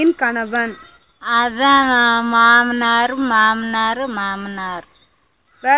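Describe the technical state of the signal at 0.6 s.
At 0.6 s the signal is intact, carrying the narrowband sound of a G.711 call path with nothing above about 4 kHz and no fault present.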